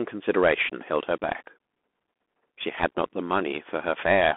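Speech runs through a Bluetooth CVSD headset codec for its whole length, confined to a band of about 250 Hz to 3.5 kHz, with the thin, telephone-like quality that fits a 64 kbps CVSD link. The codec sends one bit per sample to step the waveform up or down, so fast, loud high content outruns the step size: sibilants turn scratchy and a grainy hiss sits beneath the speech. A spectrogram shows hard edges at both band limits and a fuzzy noise floor between words.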